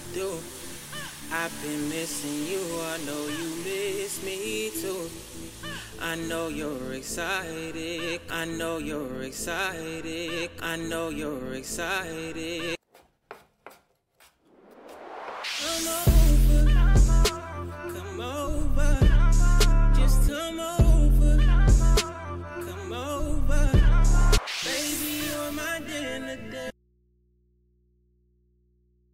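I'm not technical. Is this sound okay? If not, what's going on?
No. At 26.71 s the sound suddenly drops out and never returns, leaving only a low mains hum to the end. This audio dropout to a faint residue is likely a lost connection. Unlike a pause or fade, it cuts off instantly.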